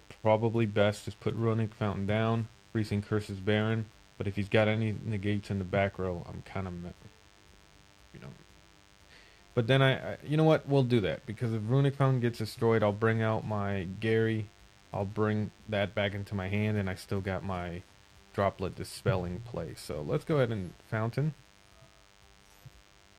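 From start to finish a thin, steady buzz sits under the sound. This is DECT cordless phone buzz. A nearby handset or base station fires a radio burst every 10 ms, and the audio circuitry rectifies it into a 100 Hz tone rich in harmonics. It stays roughly 30 dB below the programme. On a spectrogram it shows as evenly spaced horizontal lines at 100 Hz multiples, and the waveform carries a regular 10 ms pulse train.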